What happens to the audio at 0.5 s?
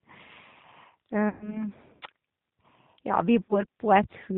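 At 0.5 s the speech carries G.729 codec damage, and it runs through the whole clip. The sound points to a low-rate VoIP codec near 8 kbit/s. Each 10 ms frame is rebuilt from a vocal tract filter, a pitch predictor and a few pulses. Everything above 4 kHz is gone, so the speech sounds dull and boxed in. The damage is plainly audible: a rough, buzzy, synthetic texture on the voice.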